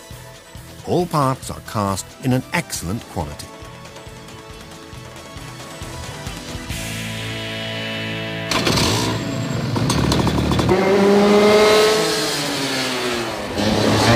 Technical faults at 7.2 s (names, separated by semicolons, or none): clock drift buffer slips